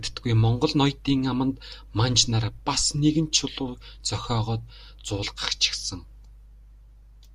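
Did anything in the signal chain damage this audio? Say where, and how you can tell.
No, nothing in the signal chain damaged this speech.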